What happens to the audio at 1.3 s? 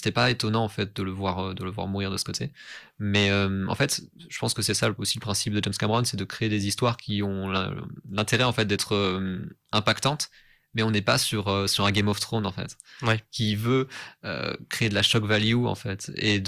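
Nothing goes wrong at 1.3 s; the speech carries on intact through that moment, with no dropout, click or distortion.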